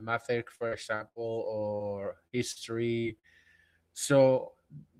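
Repeated packet loss (robotic sound) runs from 0.55 to 1.19 s in this speech clip: four dropouts, the longest 74 ms, are each patched by extending the preceding sound, so about a third of that stretch is synthetic and comes out choppy. Short concealed packet loss then hits at 2.27, 2.52, 3.00 and 3.19 s, with roughly 40 ms missing each time. The receiver bridges each hole by continuing the last sound before fading back into real audio, leaving brief smears or wobbles.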